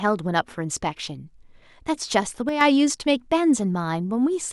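A speech clip with a brief one-channel dropout from 2.49 to 2.61 s: the sound falls abruptly by about 6 dB without going silent, then returns. Unlike a full dropout, signal continues; the clean 6 dB step, rather than a gradual dip, points to one stereo channel likely lost before mono summing.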